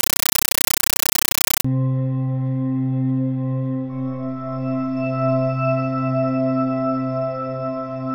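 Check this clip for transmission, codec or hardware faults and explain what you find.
A compressed stream played as audio occurs from 0 to 1.65 s. An AC-3 bitstream, consistent with a 448 kbps Dolby Digital feed, was passed as plain samples, undecoded. Each frame becomes a 9.33 ms noise burst, then silence, repeating 31.25 times per second as loud, chattering static.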